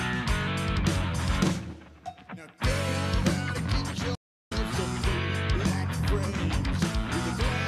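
The audio has a digital broadcast dropout from 4.15 to 4.52 s. It falls silent through a very fast fade of about 8 ms and comes back roughly 360 ms later, which points to a run of corrupted frames that the receiver muted rather than decoded. It differs from an analogue fade, which sinks gradually into hiss, and from a clumsy edit, because the programme resumes further on and the passing material is simply gone.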